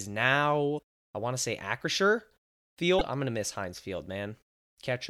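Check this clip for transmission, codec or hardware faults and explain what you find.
Two brief codec faults are audible, both of the same kind.

Damaged data in a compressed stream: a short chirp, squawk, click or hole at 0.75–0.79 s, just before "I want to say", and again at 2.97–3.01 s, just before "I'm going to miss". Corrupted bytes make the decoder misread frames and lose sync until it finds the next valid frame header.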